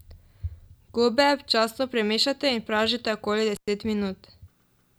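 At 3.55 s the speech cuts out for about 108 ms, until 3.68 s: an intermittent contact, where a loose plug or cable briefly breaks the circuit. Crackle at both edges and faint hiss inside the gap distinguish it from a clean digital dropout.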